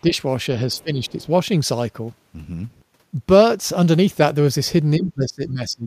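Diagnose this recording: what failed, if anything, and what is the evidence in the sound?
Speech suppressed in double talk, at the call-processing stage: the talker's level sags at 0.02–0.13 s (about 5 dB), 0.67–1.29 s (about 10 dB) and from 4.98 s to the end (about 20 dB). The likely cause is an echo canceller ducking the near talker while the far end spoke.

Other side's voice leaking through, also in call processing: a faint second voice appears at 0.74–0.83 s and 1.06–1.26 s, about 35 dB below the talker, inside the same overlap window. This is likely loudspeaker echo the canceller left behind. Analogue crosstalk would carry the other signal steadily rather than surfacing in scraps.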